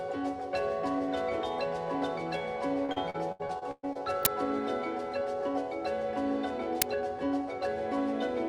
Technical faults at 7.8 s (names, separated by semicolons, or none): none